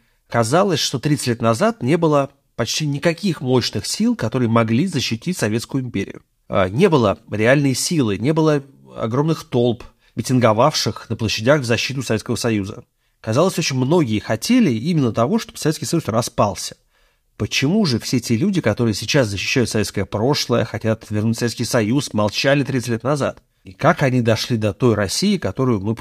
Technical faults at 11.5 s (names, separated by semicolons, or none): none